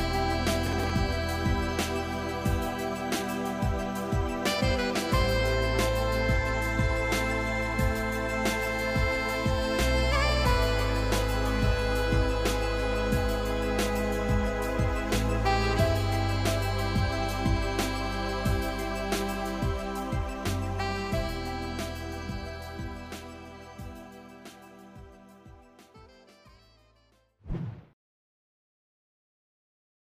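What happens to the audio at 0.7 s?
A gritty burst of crackle tears through the sound from 0.67 to 0.90 s, processor overload crackle: very short buffers, around ten, miss their deadlines and are skipped, leaving hard-edged gaps.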